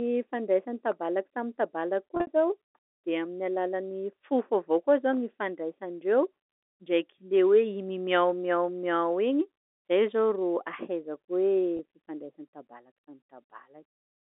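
At 2.15 to 2.27 s, a burst of packet loss with pitch repetition drops about 100 ms of audio scattered across 120 ms, the longest continuous gap being 60 ms. That suggests roughly ten small packets went missing. The receiver fills each hole by looping the last pitch period, so the speech briefly holds a buzzy, stuck tone before fading and cross-fading back. A second, 20 ms loss at 11.77 to 11.79 s leaves only a slight held blip over the telephone-band G.711 signal.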